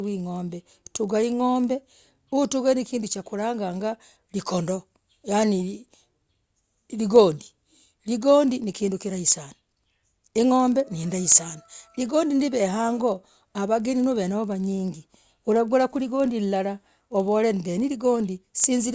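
Resampler restarted on every block, throughout the speech: the conversion, which fits 44.1 kHz down to 16 kHz, was run on 40 ms blocks separately, so each block edge lacks its true neighbours and carries a small error, heard as a 25 Hz buzz present only while speech sounds.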